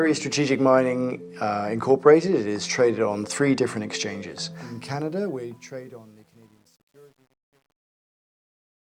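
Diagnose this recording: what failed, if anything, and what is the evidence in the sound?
The fade-out from 4.53 s turns gritty, worst from 5.52 s onward. This is truncation distortion on a fade: an undithered gain stage, consistent with 10-bit resolution, steps the tail.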